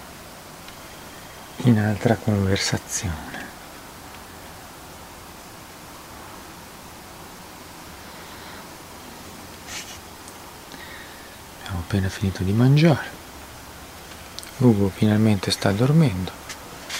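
From start to finish, a grainy distortion rides on the sound. Its level sits roughly 25 dB under the signal. It moves with the audio instead of staying independent of it. The likely cause is low bit depth without dither. The signal was held to about 8 bits and rounded to the nearest step. The rounding error follows the waveform. It comes through as gritty texture on quieter passages, or as a near-steady hiss where the audio is dense.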